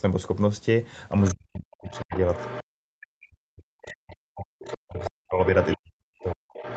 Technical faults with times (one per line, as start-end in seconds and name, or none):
1.20-1.35 other side's voice leaking through
1.33-6.76 speech suppressed in double talk
1.90-2.64 other side's voice leaking through
3.82-6.76 other side's voice leaking through